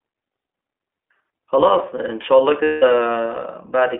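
From start to finish the speech runs through the iLBC codec, squeezed into a phone band of roughly 300 Hz to 3.5 kHz. The frame-by-frame excitation coding leaves it plainly rough and a bit synthetic, which fits iLBC's 20 ms mode at around 15 kbps.

Then at 2.64 s there's a burst of lost iLBC frames, running to 2.84 s. The decoder fills the gap by repeating the last pitch cycle mixed with noise, so you hear a held, buzzy vowel. The hole lasts 180 ms, which points to about nine dropped frames.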